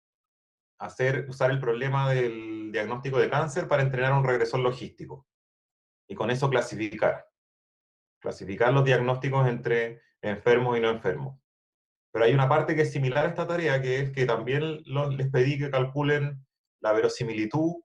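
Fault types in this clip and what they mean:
Short stall from a late packet: A packet arrived after it was due, and the jitter buffer ran dry. The receiver held the last sound until it came, then carried on from the same point. Nothing is lost, but the sound hangs too long. Here it happens twice. At 6.83 s the hold lasts 80 ms. At 13.12 s it lasts 30 ms. Each one adds to the delay by the same amount.
Jitter buffer speed-up: The buffer was holding more audio than its target, so the receiver trimmed it down. It cut many short pieces, each one or a few pitch periods long, one after another. The pitch stays the same, but the audio plays faster and sounds a little hurried. This runs from 11.62 s to 13.11 s at about 105% speed. Roughly 70 ms of audio is removed over that stretch.
Short concealed packet loss: A small piece of audio never reached the decoder in time. The receiver filled the gap by extending the sound just before it, then blended back into the real signal. 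At 13.19 s, 20 ms is missing and is replaced this way. It is heard as a brief smear or wobble. It comes just after the 30 ms stall and right at the end of the speed-up, so three faults fall close together.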